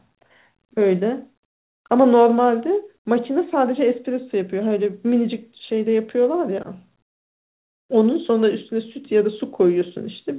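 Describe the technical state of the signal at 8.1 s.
At 8.1 s the audio is intact, with the speech carrying the narrow telephone-band sound of a G.711 call path that leaves nothing above 4 kHz.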